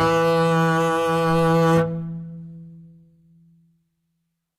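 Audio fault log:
Throughout, HE-AAC compression, likely: the treble of the music has been rebuilt by copying lower bands upward rather than coded directly, which fits a bitrate near 20 kbps. Above the crossover the harmonics no longer line up, so the top end sounds bright but gritty and metallic, and the damage is plainly audible. A spectrogram shows repeated, blocky patches of the lower spectrum stacked in the treble and nothing at all above 14.9 kHz.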